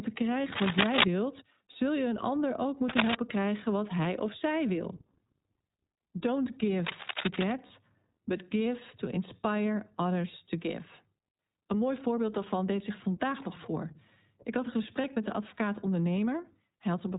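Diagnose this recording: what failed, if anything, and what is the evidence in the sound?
The codec stage is at fault. The speech is band-limited, with nothing above 4 kHz. It sounds rough and slightly synthetic throughout. The damage is plainly audible. This is iLBC codec coding, which fits its 15.2 kbps mode with 20 ms frames. Each frame's excitation is coded on its own, and the low rate costs naturalness.

Analogue wiring shows cable scratch noise. Dense, uneven rustling bursts sit over the audio from 0.52 to 1.04 s and from 2.89 to 3.15 s, between "je een ander ook" and "krijgen wat hij of". Both are somewhat louder than the speech. A third burst, from 6.86 to 7.52 s, is about as loud as the speech. The likely cause is a worn cable or connector being moved, with its contact resistance jumping rapidly.

The network dropped packets, giving lost iLBC frames. At 1.72 to 1.77 s, just before "je een ander ook", and at 7.66 to 7.71 s, about 40 ms of sound becomes a held, buzzy vowel. 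Each gap fits two lost frames. At 15.02 to 15.06 s, between "had een" and "met de", the gap is 20 ms, which fits one frame. The decoder repeats the last pitch cycle with added noise. The voice is right again almost at once.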